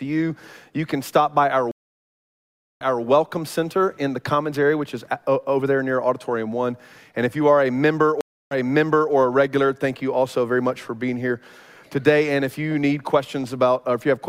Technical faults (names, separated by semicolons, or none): stream reconnect